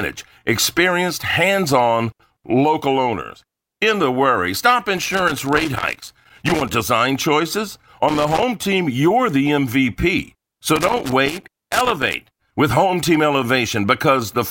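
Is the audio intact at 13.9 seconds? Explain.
Yes, at 13.9 seconds the speech runs intact, with no audible fault at that moment.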